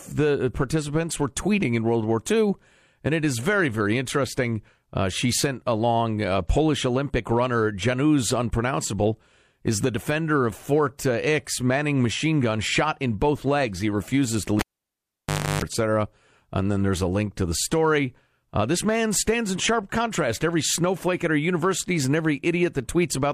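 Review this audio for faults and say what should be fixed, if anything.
At 14.59 s, right after "refuses to", a cable is pulled and plugged in while live. A pop opens a near-silent gap of about 0.98 s. While only the plug tip makes contact, there is a 0.31 s burst of 50 Hz mains buzz, and a second pop at 15.62 s brings the sound back. On the waveform, two sharp spikes bracket a flat stretch. On the spectrogram, the buzz appears as stacked horizontal lines at 50 Hz and its harmonics. To prevent this, mute the channel or keep every connector seated and secured before recording.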